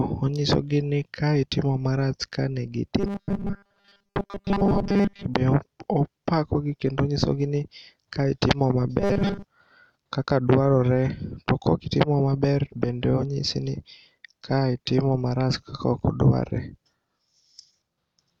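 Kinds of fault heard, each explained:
Robotic sound from repeated short buffers: new audio is likely reaching playback too seldom, so the software keeps replaying its last tiny slice, about 5 ms long, while most of the real speech in those stretches is skipped. Looping a 5 ms slice imposes a fixed 200 Hz buzz, so from 2.99 to 5.25 s and again from 9.00 to 9.44 s the voice becomes a rigid, metallic buzz that only loosely follows the words.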